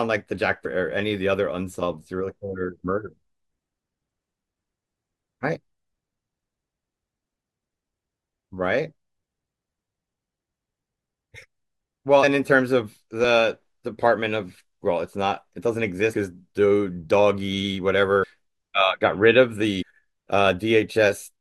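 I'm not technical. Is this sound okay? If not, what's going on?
No. The speech has compressed frames skipped, where short chunks of audio never play. It jumps ahead at 0.65, 3.06, 5.55, 12.22, 13.23, 16.13, 18.22 and 19.81 s. The largest gap, at 0.65 s, drops well over half a second.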